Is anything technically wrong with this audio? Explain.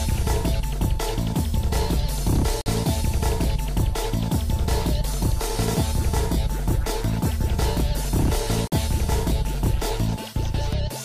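Yes. A gap between stream segments appears at 2.61–2.66 s and 8.67–8.72 s, about 47 ms and 46 ms long. Misaligned segment timestamps leave silent holes with hard edges, showing as flat waveform breaks and full-height blank spectrogram columns. Their 6-second spacing fits 6-second segments.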